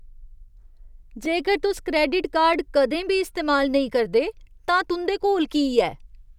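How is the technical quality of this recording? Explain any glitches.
The recording has three short glitches from a repeated buffer. At 1.25 s (just before "जेकर तुस क्रैडिट"), 2.53 s (between "जेकर तुस क्रैडिट" and "कदें बी इस्तेमाल नेईं") and 4.69 s (after "बी इस्तेमाल नेईं करदे"), fresh audio arrived late, so playback looped a 2.9 ms chunk, which fits a 128-sample buffer. It replayed two, three and one extra times. Nothing appears to be lost. Each event is heard as a tiny click or buzz.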